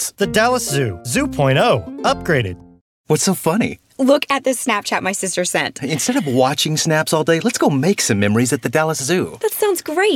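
Nothing here trips any alarms, with no glitches, dropouts or odd artefacts turning up anywhere along the way.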